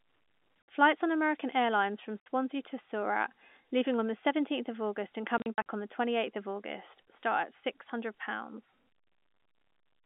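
At 0.66 s, and again from 2.21 to 2.26 s, the speech drops out into sudden silence. This is packet loss filled with silence. Lost packets were replaced by dead air, so each gap opens and closes with a hard edge. From 5.38 to 5.64 s, just before "on the", several short holes are scattered across the sound. The longest runs are about 40 ms, which suggests 20 ms packets. The telephone-band G.711 line underneath stays steady.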